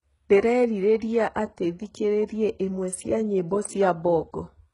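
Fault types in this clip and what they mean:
HE-AAC compression: The heavy damage throughout the speech is likely from HE-AAC, and the sound points to a bitrate near 12 kbps. The treble is rebuilt from copied lower bands. So s sounds turn gritty and metallic. Nothing is heard above 11.1 kHz.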